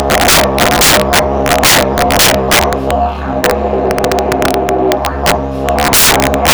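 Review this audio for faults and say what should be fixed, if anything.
Sharp cracks hit loud passages throughout: integer overflow, as a gain about 21 dB too hot wraps around 7 percent of samples to the opposite sign. To prevent it, reduce the gain to leave headroom and use saturating (clamping) arithmetic so over-range peaks are limited instead of wrapping.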